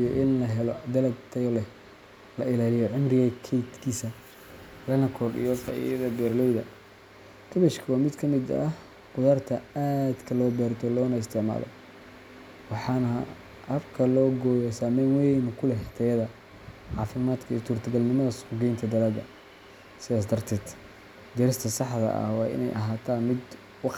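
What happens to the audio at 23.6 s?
Nothing goes wrong at 23.6 s: the speech continues intact through that moment, with no dropout, click or other fault to be heard.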